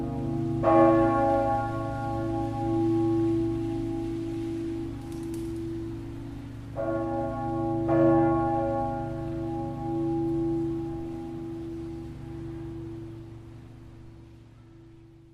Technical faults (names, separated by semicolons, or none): none